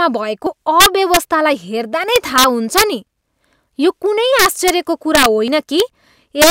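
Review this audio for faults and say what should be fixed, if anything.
The speech skips ahead at 0.46, 2.36 and 5.48 s, losing roughly 40, 10 and 40 ms, likely a dropped buffer (overrun) from late sample collection.

Integer overflow produces harsh sign-flip cracks on loud peaks at 0.80–1.17, 2.16–2.83, 4.39–4.70 (after "यो कुनै"), 5.15–5.26, 5.80 and 6.42–6.51 s, where the gain pushes peaks about 0 to 4 dB past full scale.

To prevent both, enlarge or service the capture buffer sooner and use saturating arithmetic or limiting before integer conversion.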